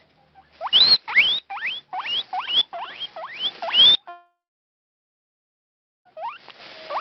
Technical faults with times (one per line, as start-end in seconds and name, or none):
4.09-6.07 long network dropout